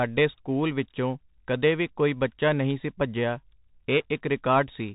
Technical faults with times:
0.00-4.95 Bluetooth CVSD headset codec

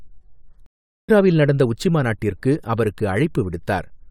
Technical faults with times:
0.66-1.10 stream reconnect

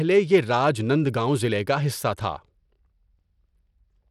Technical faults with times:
0.00-4.10 Bluetooth SBC compression

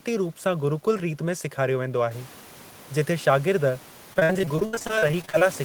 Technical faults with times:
4.13-5.44 repeated packet loss (robotic sound)

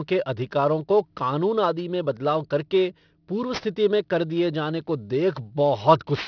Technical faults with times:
0.00-6.28 aliasing

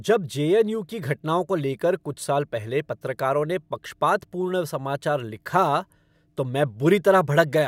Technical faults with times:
none

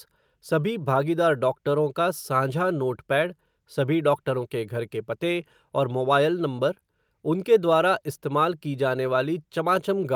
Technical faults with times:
none

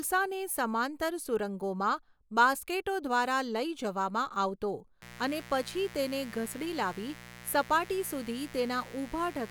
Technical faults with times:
5.02-9.51 mains buzz

